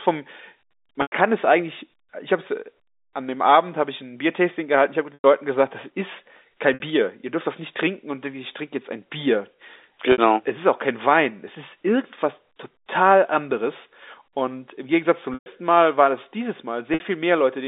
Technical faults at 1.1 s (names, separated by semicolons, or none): packet loss with pitch repetition